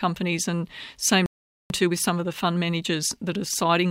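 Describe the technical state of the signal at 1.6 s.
At 1.6 s the signal is inside a playback stall lasting from 1.26 to 1.70 s. The player likely ran out of buffered data or had its thread blocked, so output dropped to silence for about 441 ms, cutting the speech off mid-flow until playback recovered.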